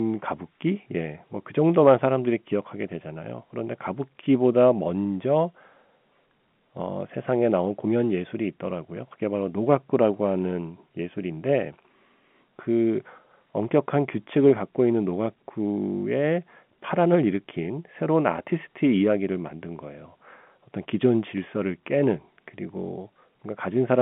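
Nothing stood out on listening to this speech, which comes through the narrow band of an ordinary G.711 telephone line.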